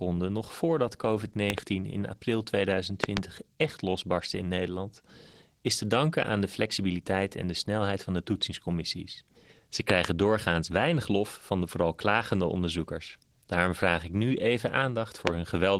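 Throughout the speech, Opus voice compression is plainly audible. The hybrid coder handles the lower band with linear prediction and adds a coarse transform layer on top, so the sound is hoarse, slightly robotic and muffled, which fits a fullband bitrate near 16 kbps.

A loud pop appears as a double pop at 1.50–1.60 s, just before "in april", and again at 3.04–3.19 s before "echt losbarstte in" and at 9.90–10.07 s. A single pop lands at 15.27–15.29 s after "vraag ik nu even". Each peaks some 20 to 25 dB above the speech, which continues underneath, and the likely cause is an electrical transient from a connector or switch.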